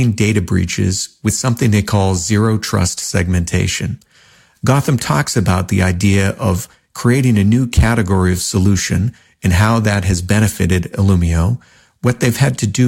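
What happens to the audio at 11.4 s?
Nothing goes wrong at 11.4 s; the speech continues through that moment without any dropout, click, distortion or other fault.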